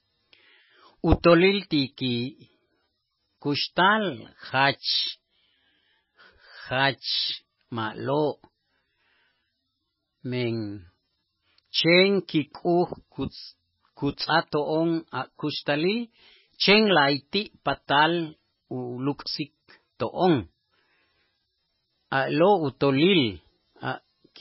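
From start to finish the speech has nothing above 5.6 kHz and carries heavy watery, swirling artefacts, likely from MP3 compression at a very low bitrate, around 15 kbps. Starved of bits, the encoder cuts the treble at that fixed point and drops weak frequency lines that flicker on and off between frames, so s sounds chirp metallically and onsets smear. A plain low-pass filter would dull the sound but leave what remains steady rather than bubbling.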